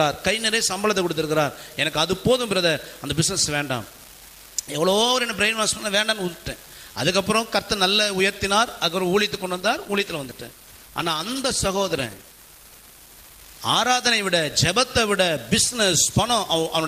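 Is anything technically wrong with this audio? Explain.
Yes, there are two faults. Throughout the clip, an unreliable data bit on one marginal data line flips at random, adding equal-sized spikes heard as a constant crackling fizz, even in pauses. From 9.35 to 13.51 s, a call bitrate drop from 128 to 18 kbps forces coarser encoding and cuts the highs, making the audio rough and muffled for about 4.1 s.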